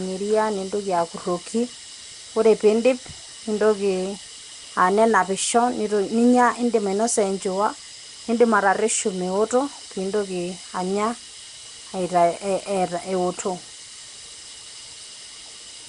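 Speech, likely passed through Nellymoser compression: starved bands are refilled with noise, giving a rough, hissy halo, underwater smearing, and nothing above 10.6 kHz throughout.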